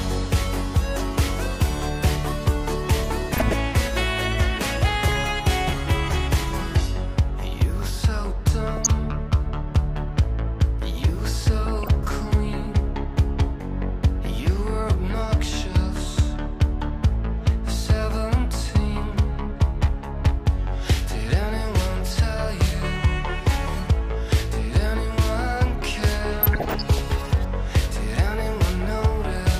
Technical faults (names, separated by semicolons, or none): DAB burbling